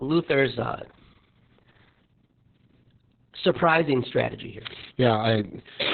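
From start to finish the speech carries heavy Opus voice compression damage. The SILK coder has cut the band to about 4 kHz and coded the excitation coarsely, leaving the speech muffled, hoarse and slightly robotic, which points to a rate near 6 kbps.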